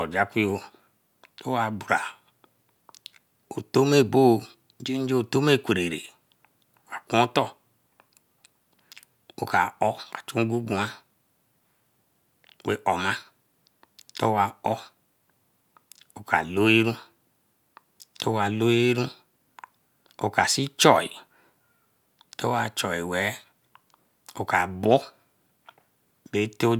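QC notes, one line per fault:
No faults were found in this speech recording. Nothing heard here calls for a QC note.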